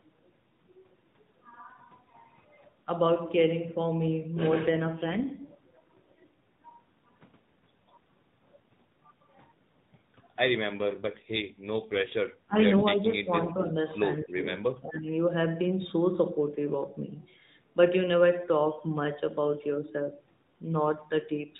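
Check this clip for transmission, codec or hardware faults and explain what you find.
Three kinds of fault turn up in this speech, carried over an AMR narrowband mobile link whose normal 12.2 kbps mode already limits the band to below 4 kHz.

AMR rate drop, at 4.68 to 6.44 s and again at 10.78 to 12.16 s. The network twice pushed the codec down from 12.2 to 5.9 kbps, spending the freed bits on error protection for a weakened radio link. With fewer bits per 20 ms frame the vocal-tract model and pulse excitation are coded more coarsely. The voice turns rougher, buzzier and more synthetic. There is no gap and no change of bandwidth, and the normal quality returns once the rate climbs back.

Speech suppressed in double talk, at 12.46 to 12.56 s, 12.93 to 13.31 s, 13.54 to 13.75 s and 14.78 to 15.08 s. The likely cause is an echo canceller that lost track while both ends spoke, mistook the talker for returning echo and attenuated it. 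The voice dips sharply for a short moment, by around 30 dB in the first instance. The later dips are gentler, roughly 10, 5 and 15 dB, lasting a few tenths of a second each.

Echo leak, at 14.16 to 14.4 s. A loudspeaker at the far end probably let some of its own playback back into its microphone, and the canceller failed to remove all of it. A faint delayed copy of the voice, trailing by 274 ms and about 30 dB below the direct speech, briefly shadows the talker as a scrap of returning sound.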